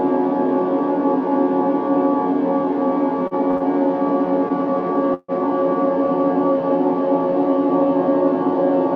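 Three short stalls from late packets fall close together, at 3.27 s, 3.51 s and 3.57 s. Each time a packet missed its playout deadline and the jitter buffer emptied, so the receiver held the last sound for 37 ms, 22 ms and 33 ms, then resumed where it stopped. Nothing is lost, but the sound drags with a held, buzzy or dipping texture, and the playout delay grows by 92 ms in total.

At 5.14 s a call audio freeze runs to 5.31 s. The last sound is carried on as a synthetic fill for 145 ms, followed by 30 ms of silence before the audio picks up again from the point where it broke off. No content is dropped; a 145 ms gap is inserted, which adds the same amount to the delay. This is likely caused by packets being held up in transit long enough to drain the jitter buffer.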